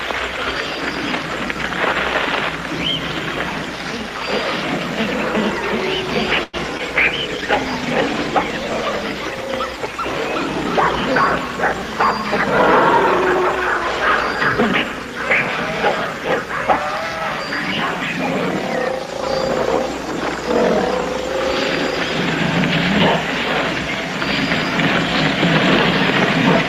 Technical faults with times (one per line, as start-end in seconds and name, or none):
6.43-6.55 call audio freeze
6.77-6.81 short concealed packet loss
7.06-9.11 call bitrate drop